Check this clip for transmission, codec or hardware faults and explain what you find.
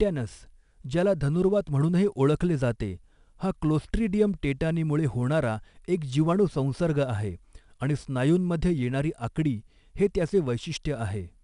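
One codec fault is present, and it runs through the whole speech clip.

4-bit ADPCM compression, throughout: each sample is coded as a coarse 4-bit step away from a predicted value, with the step size adapting as the signal moves. The resulting error is a broadband noise that rises and falls with the level, so every loud stretch carries a plainly audible gritty hiss, and sharp attacks roughen where the step cannot catch up. Nothing is present above 10.6 kHz, which dulls the top end and fits a reduced sample rate and a data rate of about 88 kbps.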